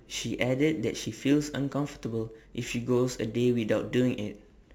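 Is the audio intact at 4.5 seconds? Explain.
No. Crude rate conversion is present at 4.5 s, as it is across the whole speech clip. The rate was raised from 44.1 kHz to 48 kHz by repeating samples with no filter, adding inharmonic tones around 30 dB below the speech, heard as a gritty fizz.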